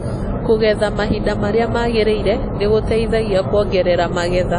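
Throughout this speech recording the sound rings and smears, with a washy hiss that swells and fades with the signal and nothing above about 10.1 kHz. That points to WMA compression, likely at a low bitrate around 32 kbps, where long transform blocks spread quantisation noise and zero weak detail.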